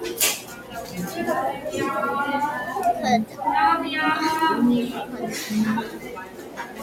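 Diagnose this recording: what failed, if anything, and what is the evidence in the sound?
Noise suppressor applied to music or sounds, throughout the clip: a speech-oriented suppressor in the call-processing chain stays engaged and treats steady sound and decays as noise. Level swings by around 10 dB, so the audio pumps and thins as sustained material sinks while attacks pass.

Sound cut by the noise suppressor at 0.4–0.98 s, 3.25–3.41 s, 5.05–5.21 s and 5.86–6.82 s: the same stage clamps these passages harder, with drops of about 9, 8, 7 and 9 dB. Held or fading sound sinks and tails end early, while sharp onsets survive.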